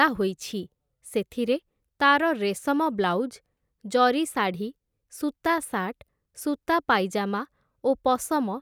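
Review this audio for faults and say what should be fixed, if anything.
No faults; nothing needs fixing.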